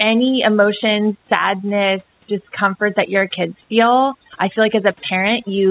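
Overdone noise removal runs through the whole of this speech clip: a noise reducer set far too aggressively pulls individual frequency bands down or out whenever they sit near its noise estimate, stripping quiet parts of the speech too. The gaps fall to near silence with twinkling specks. The call-codec path is audible as a band limit with nothing above 4 kHz, which fits G.711 A-law at 64 kbps, and the room noise sits about 42 dB below the speech.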